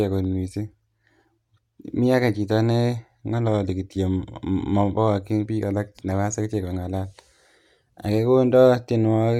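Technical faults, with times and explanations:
Nothing technical stands out here; the recording runs along without a single problem worth flagging.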